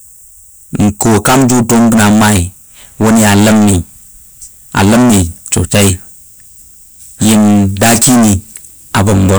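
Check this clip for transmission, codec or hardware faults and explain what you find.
One fault runs through the whole recording: hard clipping. Every loud moment of the speech comes out as a harsh, buzzing fuzz rather than clean sound. The signal is driven about 30 dB beyond what a stage in the chain can pass, so nearly a third of the samples hit the ceiling and are cut flat, and those flattened peaks spray harmonics high into the spectrum.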